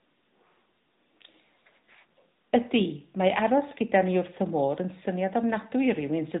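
Throughout, the speech carries AMR narrowband mobile codec damage. Nothing passes above 3.8 kHz. The voice sounds plainly buzzy and synthetic, fitting a mid rate near 10.2 kbps.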